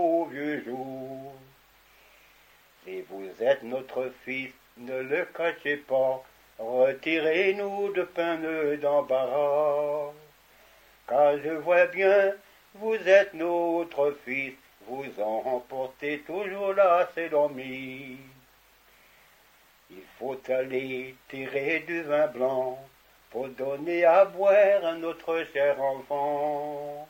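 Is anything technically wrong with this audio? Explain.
No, no technical faults heard.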